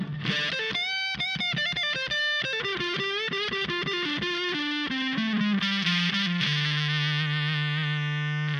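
From 5.60 s to the end, there's pre-emphasis left on: the treble boost applied for transmission never got its matching de-emphasis, which fits a J.17 curve. Around 10 kHz it sits about 11 dB hot relative to 1 kHz, so everything turns thin, bright and hissy-sibilant.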